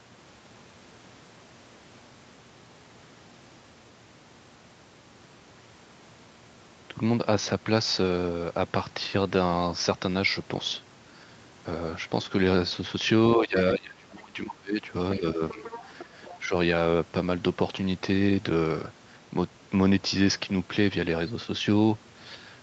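From 13.36 to 13.56 s the speech dips by about 10 dB, then from 13.72 to 14.8 s it drops by up to about 25 dB. This is speech suppressed in double talk, likely an echo canceller ducking the talker while the far end spoke. It shows as a notched, thinned envelope in the waveform and faded upper bands on the spectrogram. A further dip of about 10 dB comes at 15.19–15.64 s, and a shallow one of about 5 dB at 16.41–16.53 s.

Overlapping this, from 15.49 to 16.05 s and again at 16.22–16.39 s, the other side's voice leaks through at about 15 and 20 dB below the speech. This is likely residual loudspeaker echo. It appears as faint harmonics beneath the main trace.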